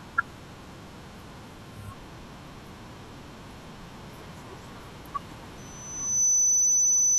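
At 5.57 s a loudspeaker feedback squeal begins: a single 6 kHz tone swells over roughly three-quarters of a second to about 20 dB above the speech and holds to the end. Unlike a steady interfering whistle, it builds by itself as the microphone re-amplifies its own loudspeaker.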